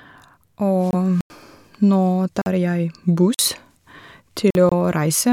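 At 0.91 s the speech drops out for about 23 ms and returns at 0.94 s. The hole is short and clean, and the sound picks up as if it had kept playing. This is a Bluetooth dropout, likely caused by a single audio packet reaching the headphones too late and being discarded. Output stays silent until the next good packet arrives.

At 1.21 s a block of digital silence begins. It lasts about 93 ms and ends at 1.30 s. The sound cuts out with no fade. The length fits a 4096-sample buffer that the program did not fill in time. Shorter blocks of about 46 ms follow at 2.42 to 2.46 s, 3.34 to 3.39 s and 4.51 to 4.55 s. Each fits a 2048-sample buffer and is heard as a brief hole.

At 4.69 s a second Bluetooth dropout opens the same kind of 23 ms gap. It ends at 4.72 s, and the audio carries on at the later point.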